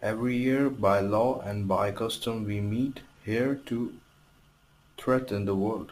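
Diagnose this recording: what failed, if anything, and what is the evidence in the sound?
The fault sits at the sample-format conversion stage: a crude rate conversion from 48 kHz to 44.1 kHz that simply picks the nearest sample, with no filtering. Throughout the speech a gritty, inharmonic fizz rides on the louder and brighter sounds, roughly thirty decibels below them. Unlike clipping, it appears without any flattening at peaks. Unlike codec artefacts, it has no smearing or warbling. The dropped-sample error repeats in the 48/44.1 cycle, producing shifted, inharmonic copies of the voice.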